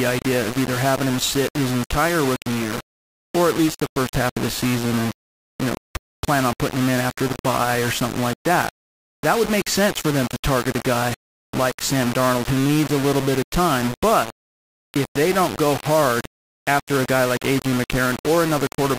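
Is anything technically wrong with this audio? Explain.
Yes. Low bit depth without dither runs through the whole speech clip. The likely cause is rounding to very few levels with no added dither, with coarseness that fits about 4 bits. The rounding error tracks the waveform instead of forming steady hiss. So the distortion is only about 10 dB below the speech itself. Quiet passages turn harsh and gritty. The softest sounds crackle between two steps or drop out. The grain shifts as the speech moves.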